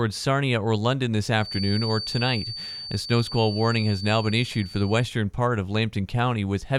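From 1.36 s to 5.10 s a feedback whistle sits behind the speech: a thin, steady tone near 4.6 kHz, roughly 10 dB below the signal, swelling and fading slowly in level. This is likely a loudspeaker-to-microphone loop held just at the feedback threshold, sustaining without running away.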